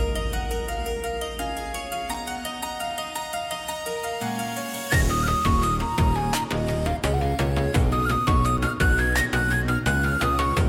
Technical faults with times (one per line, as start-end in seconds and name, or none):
2.14 block of digital silence
8.58 block of digital silence